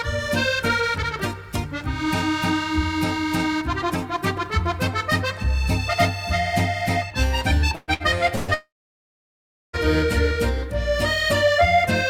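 Between 7.75 s and 8.51 s the audio is hit by three bursts of packet loss, at 7.75–7.91 s, 7.94–8.03 s and 8.36–8.51 s. In each one, about 120 ms, 60 ms and 120 ms of material is missing. The receiver's concealment extends the last received sound as a decaying buzz or hiss across the hole. In the first burst that fill fades to about 20 ms of silence before playback resumes. Each time the audio picks up later in the stream, skipping the lost section.

Almost immediately after, from 8.54 s to 9.76 s, roughly 1.2 s of audio is gone, most likely from a long network dropout. The concealed tail fades over about 0.12 s and leaves about 1.07 s of silence. Sound returns at 9.76 s without the intervening content. Together, the clustered bursts and this outage point to a deteriorating network path across roughly two seconds.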